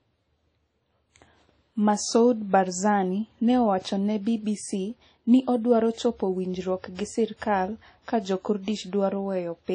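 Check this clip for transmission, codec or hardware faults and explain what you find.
A codec fault runs through the whole clip. Throughout, the speech sounds ringing and washy, with breathing hiss. This is likely WMA compression. Long transform blocks smear quantisation noise. Nothing passes above 10.1 kHz, which fits a bitrate near 32 kbps.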